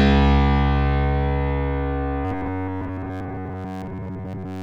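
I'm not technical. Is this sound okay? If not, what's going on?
No. From 2.25 s onward it becomes a stiff metallic buzz near 94 Hz. This is robotic sound from repeated short buffers, likely because audio arrived too seldom.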